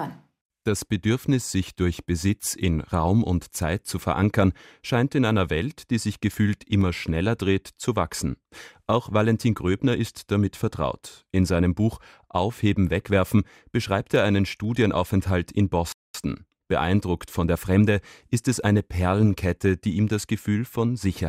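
Two devices in the chain are likely running on separate clocks that disagree by something on the order of 100 parts per million, so the buffer between them slowly drifts until a small block of samples, around fifteen, is dropped or repeated. These clock drift buffer slips come back every 3.92 s, from 2.90 s to 18.77 s, about five in all, and each is heard as a brief click or pop in the speech.

Between 15.92 s and 16.14 s, the player likely ran out of data or had its thread blocked, and output went silent. This playback stall cuts the speech off mid-flow for 220 ms before it picks up again.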